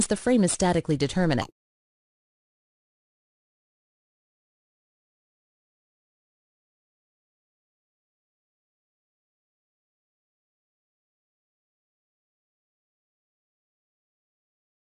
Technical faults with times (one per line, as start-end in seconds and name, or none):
1.42-2.83 wrong sample rate